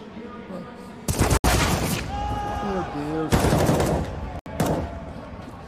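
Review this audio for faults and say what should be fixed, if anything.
Two gaps at a join of encoded pieces break the continuous sound, at 1.37 s (69 ms) and 4.39 s (68 ms). Each piece kept its encoder start delay and last-frame padding. The codec smears the edges. Trim that delay and padding before joining.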